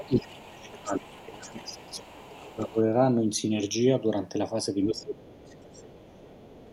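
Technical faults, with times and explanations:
Throughout, channels drifting apart: the two channels run on clocks differing by around 70 parts per million, so their offset creeps to about half a millisecond. Summed to mono, this gives slow flanging; a spectrogram shows comb notches gliding gradually across frequency.
0.00–2.75 s and 4.84–6.73 s, other side's voice leaking through: a faint second voice sits roughly 25 dB, then 30 dB, below the main speech, likely loudspeaker echo the canceller missed. It shows as weak harmonic traces underneath.
0.06–2.78 s and 4.91–6.23 s, speech suppressed in double talk: the main voice dips by up to about 20 dB, likely the echo canceller ducking everything while both sides talked. The waveform envelope shows sudden hollows.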